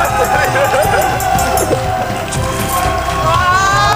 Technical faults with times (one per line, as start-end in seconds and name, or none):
0.00-3.95 USB whine